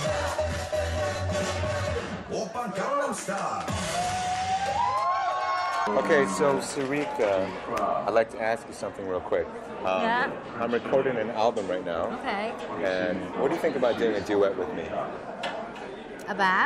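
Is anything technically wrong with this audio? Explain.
Yes. At 13.15 s there is an overlap between stream segments. Overlapping time stamps at a 4-second segment boundary cause audio to be trimmed, heard as a brief skip.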